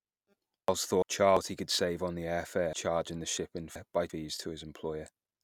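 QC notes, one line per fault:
0.68–1.37 s, chunks out of order: a 341 ms chunk was delivered one chunk late and plays after its successor, giving a jumbled moment with hard joins.
2.73–4.10 s, chunks out of order: a 341 ms chunk arrived three chunks late and plays after the three that should follow it, so the sound briefly garbles.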